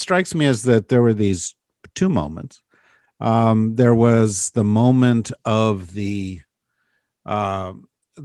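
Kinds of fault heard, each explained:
No technical faults can be heard anywhere in the recording. Nothing in the speech points to a problem in how it was captured or carried.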